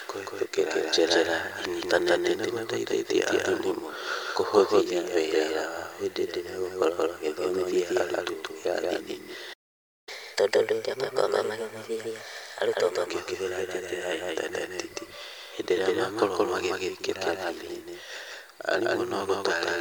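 From start to finish the speech carries a doubled audio track: a second, full-band copy trails the first by roughly a fifth of a second at about the same loudness, so every syllable is heard twice. Unlike an echo or reverb, the repeat has no decay and no room colour, and there is only one repeat. It most likely comes from the same signal being picked up a second time through a slower path.

At 9.53 s the sound cuts out in mid-flow, and silence holds until 10.09 s, about 0.54 s. This is a playback stall, most likely the player starving for data or its thread being blocked. It differs from a brief dropout because the gap is long enough to register as a pause, and it differs from an edit because nothing is skipped. The speech resumes from where it stopped, with the doubled copy still trailing.

From 10.09 s to 13.09 s comes catch-up at higher speed, as the player works through its backlog by resampling at 1.15 times normal rate. 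The speech hurries along and its pitch rises by about two semitones, which gives the voice a slightly chipmunk tint. At 13.09 s pace and pitch drop back to normal. A wrong-sample-rate fault would shift the whole clip, whereas this lasts only three seconds and follows directly after the stall.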